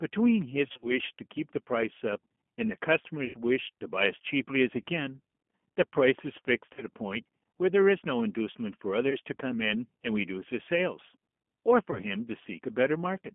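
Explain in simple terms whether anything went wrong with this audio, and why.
Yes, a couple of things went wrong. The whole clip went through a G.729 codec, a very squeezed phone-call format. It doesn't store the speech itself; it stores a rough recipe for the mouth shape and pitch and rebuilds the sound from that at the other end. Everything above about 3.4 kHz and below about 200 Hz is gone, so the speech sounds thin and boxy, with a clearly rough, slightly synthetic edge throughout.

On top of that there's VoIP packet loss concealed by the speech codec. Little chunks of the call never arrived, and the decoder filled each gap by guessing from what it had just heard. That leaves brief buzzy or smeared patches that fade out. You'll hear them at 0.69 to 0.92 s (a scattered cluster of dropouts), 3.25 to 3.36 s, 4.82 s, 6.74 to 6.83 s, 9.10 to 9.17 s and 11.91 to 12.00 s.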